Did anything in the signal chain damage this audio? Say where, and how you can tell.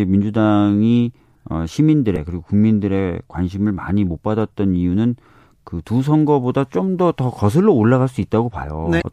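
Yes, at the codec: damaged data in a compressed stream breaks up the audio at 2.13–2.17 s and 8.98–9.02 s as the decoder loses frame sync, showing as brief disruptions.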